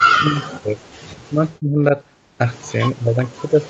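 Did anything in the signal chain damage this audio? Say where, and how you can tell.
Yes, in the call processing: likely speech suppressed in double talk. The speech dips sharply at 0.0–0.8 s, 1.13–1.94 s and 2.72 s to the end, by roughly 30 to 40 dB, as the echo canceller mistook the talker for echo and attenuated it.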